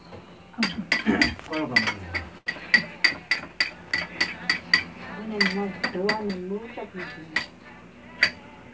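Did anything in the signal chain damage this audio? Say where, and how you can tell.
Yes. At the network stage there is a burst of packet loss from 2.38 to 2.47 s. About 80 ms of sound never arrived, and the receiver covered it by stretching the last sound and fading it. The result is a held, decaying tail, and the audio picks up again past the gap.

Also at the network stage, short concealed packet loss appears between 6.28 and 6.35 s. Roughly 10 ms went missing, and concealment synthesised about 14 ms from the preceding signal before crossfading back. It is heard as a brief smear over the G.722 call audio, which stops at 8 kHz.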